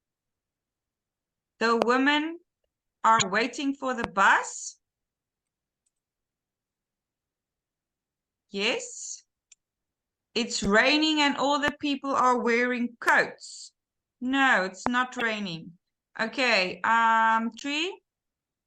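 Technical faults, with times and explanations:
1.82–1.84 s, 4.04–4.06 s, 11.68–11.70 s, 13.09–13.11 s and 14.86–14.89 s: loud pop. Each is a single sharp pop, about 20 dB above the surrounding audio, lasting roughly 20 ms, while the sound continues underneath. This is likely a brief voltage step or pulse entering the signal chain, such as a switch transient, static discharge or driver glitch. The downstream circuitry shapes that pulse into the short, hard transient heard as a pop.
3.19–3.22 s, 5.44–5.46 s, 10.63–10.66 s, 15.19–15.22 s and 17.59–17.62 s: damaged data in a compressed stream. Each event is a short chirp or blip lasting 24 to 36 ms. Corrupted bytes in the compressed stream cause the decoder to misread or reject frames and lose sync. It then outputs garbled content until it finds the next valid frame header.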